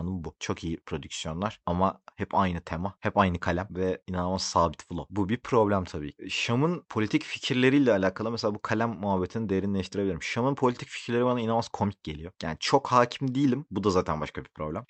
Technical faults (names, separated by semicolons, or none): short stall from a late packet